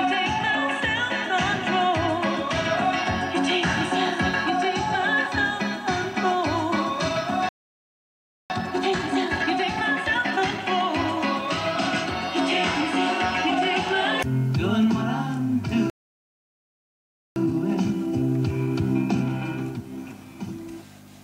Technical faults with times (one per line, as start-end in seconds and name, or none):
7.49-8.50 playback stall
8.50-10.52 time-compressed catch-up
15.90-17.36 playback stall
17.36-20.36 time-compressed catch-up